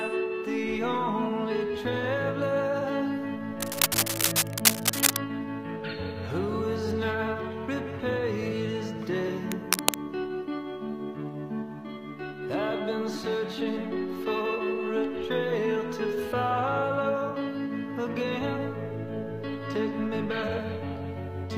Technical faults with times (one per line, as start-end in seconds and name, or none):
3.60-5.17 cable scratch noise
9.51-10.02 cable scratch noise